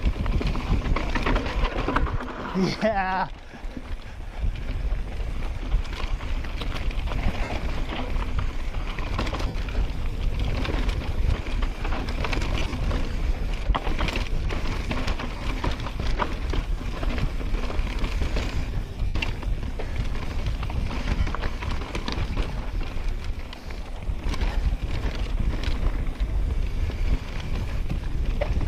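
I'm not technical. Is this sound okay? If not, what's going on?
No. Six brief hiccups are lost LE Audio frames, where pieces of the wireless Bluetooth stream never arrived. They occur at 7.44 s, 9.47 s, 12.59 s, 15.37 s, 19.06 s and 21.20 s, each losing 37.5 to 105 milliseconds of sound. The one at 12.59 s is a cluster of short gaps spread over about 150 milliseconds. Instead of going silent, the decoder fills each gap by replaying the last bit of sound in scrambled form, so you hear a short hissy blur. A simple dropout would sound like a clean silent hole instead.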